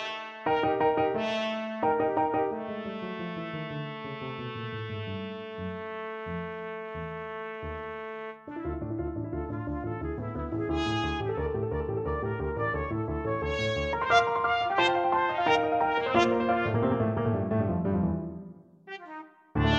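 Nothing in the audio points to a capture, transmission or playback problem, so there is nothing to time or trace to a cause.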